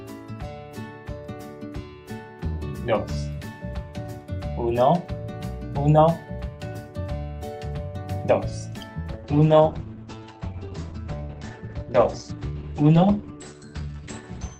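From about 9.1 s to the end, there's a call bitrate drop: the audio turns rough and watery, and the top end gets cut to roughly 8 kHz, consistent with the encoder falling to around 10 kbps.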